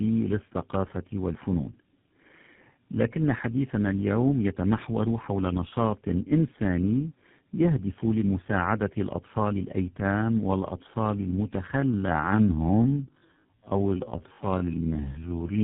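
Speech passed through tandem speech coding for its whole length, three low-rate speech coders in a row with G.711 links between them, which fits a chain of GSM full rate, AMR-NB at 7.95 kbit/s and GSM full rate again. Each coder re-encodes the previous one's errors, so the result is rougher, duller and more warbly than a single coding pass. On a spectrogram the energy stops sharply below 4 kHz, and the harmonics look smeared and blotchy rather than cleanly striped. From 11.72 s to the end at 15.63 s there is a time-stretched section. The pace drops abruptly to about 0.67 times the original speed while the pitch holds steady, which makes the speech drag. The likely cause is software fitting the audio to a longer duration by repeating short pieces. On a spectrogram, harmonic spacing stays the same while syllables and gaps widen, and in the waveform the envelopes there stretch out with repeated-looking grains.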